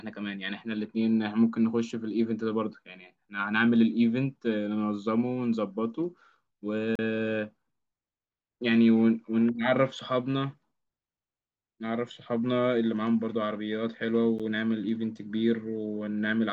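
Speech clip with two blocks of digital silence: a 35 ms hole from 6.95 to 6.99 s, and a tick at 14.39 s lasting about 12 ms, which fits a 512-sample buffer. In both, the sound cuts out and comes back with no fade.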